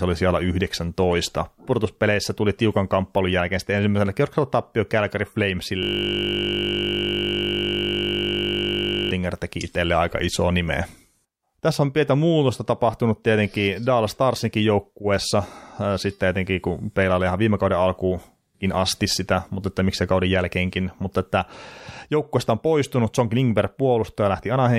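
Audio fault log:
5.83–9.11 s system hang loop: the speech freezes into a steady 50 Hz buzz as one 20 ms slice replays over and over while the system hangs. The waveform shows an identical 20 ms cycle repeating; the spectrogram shows flat harmonics spaced 50 Hz apart.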